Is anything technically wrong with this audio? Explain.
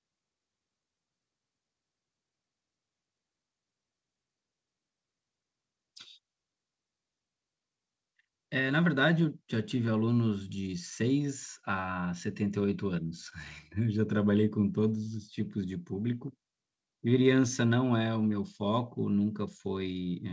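No, nothing technically wrong can be heard here.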